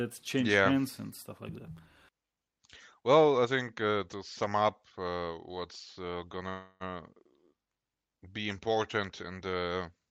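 At 6.49 to 6.92 s a call audio freeze stretches the last sound into a fading buzz, likely from a starved jitter buffer; speech resumes intact, about 0.3 s late.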